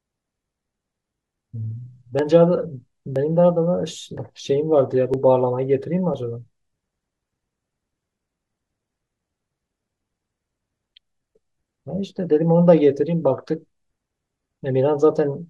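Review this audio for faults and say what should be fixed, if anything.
Overlap between stream segments causes small skips at 2.19–2.22, 3.16–3.19, 4.17–4.20, 5.14–5.16, 6.14 and 8.11–8.14 s, each dropping 19–35 ms at 1-second segment boundaries. Fix segment timestamps so consecutive segments abut exactly rather than overlapping.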